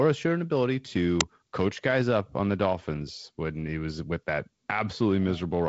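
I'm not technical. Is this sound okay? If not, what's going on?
No. At 1.21 s there's an uninitialised buffer: about 5 ms of leftover memory played as a sharp, loud hiss-burst, unlike a dropout, which goes silent. The G.722 wideband telephone coding keeps the speech clear, with nothing above 7.6 kHz.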